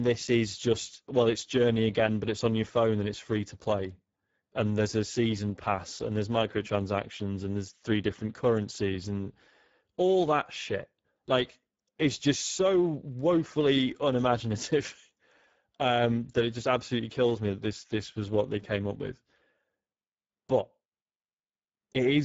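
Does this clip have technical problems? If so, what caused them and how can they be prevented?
Yes. The speech carries Speex codec damage throughout, plainly audible. Speex is a CELP speech coder, and the bitrate the sound points to, near 9.8 kbps, leaves few bits to code the excitation, so the voice takes on a hoarse, noisy grain. Nothing is present above 7.7 kHz. Unlike a transform codec such as MP3, there is no swirling or warbling; the damage sits in the voice's texture itself. To prevent it, use a higher Speex quality setting or a modern codec such as Opus.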